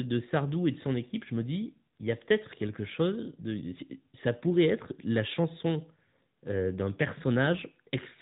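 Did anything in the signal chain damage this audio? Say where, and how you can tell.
Yes, the codec: speech sounds boxy and buzzy throughout, cut off at 3.8 kHz, fitting the AMR narrowband mobile codec rebuilding each frame from pulses.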